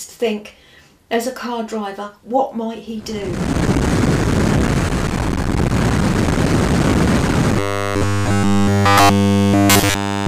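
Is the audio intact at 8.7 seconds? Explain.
No. At 8.7 s you're in the middle of a stretch of robotic sound from repeated short buffers, running from about 7.59 s to 10.27 s. New audio likely wasn't arriving fast enough, so a tiny chunk of roughly 10 ms got replayed over and over while the real signal was skipped, and essentially the whole stretch is made of those repeats. That loop imposes a fixed 100 Hz buzz, so the sound turns rigid and metallic, only loosely tracking what it should be.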